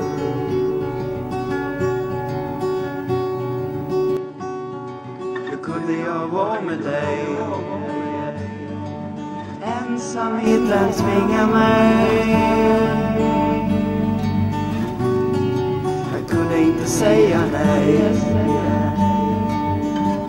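From 4.17 to 10.47 s the sound turns dull and quieter, likely an input switched to a poorer device; the spectrogram empties above 8.9 kHz.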